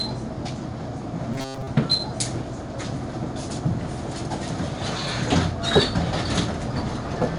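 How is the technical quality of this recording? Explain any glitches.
The recording has audible technical faults: a gritty, dulled character throughout and one brief stretch of mechanical buzzing.

Throughout, every louder moment carries a rough, grainy hiss that rises and falls with the level, sharp onsets sound smeared and distorted, and nothing is present above about 11 kHz. This is 4-bit ADPCM compression. Each sample is coded as a small step from a prediction, so the error rides on the signal, and the missing top end fits 4-bit coding at about 88 kbps.

From 1.34 to 1.68 s, the sound turns into a rigid, metallic buzz at about 133 Hz. This is robotic sound from repeated short buffers, likely caused by a short chunk of roughly 7.5 ms being looped while real audio was skipped, covering most of that stretch.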